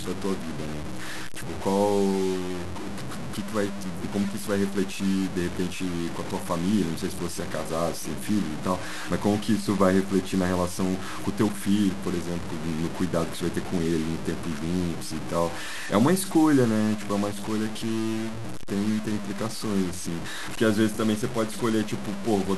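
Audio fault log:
throughout, low bit depth without dither: the speech carries a harsh grainy distortion that follows each syllable, only about 10 dB below it, and quiet tails sputter or drop to silence. This is likely 5-bit truncation; dithered requantisation would leave steady hiss instead.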